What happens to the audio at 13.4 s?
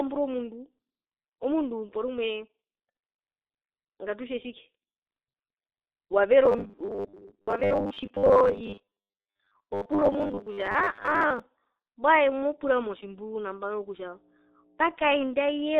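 At 13.4 s the speech is overlaid with mains hum, which runs from 12.12 s to 15.23 s. It is a steady 60 Hz tone with a few low harmonics, sitting roughly 15 dB below the speech. It typically enters through a ground loop or a nearby transformer that couples the power line into the signal path. The drone stays constant under the speech for those three seconds and then stops.

The same moment also carries the G.723.1 codec damage that affects the whole clip. The audio is confined to a telephone band of roughly 300 Hz to 3.7 kHz, with nothing above 4 kHz. The heavy coding artefacts point to a low-rate mode of about 6 kbit/s. Because the codec works in 30 ms frames and updates its voice model slowly, the speech sounds muffled and hoarse, and the consonants are smeared.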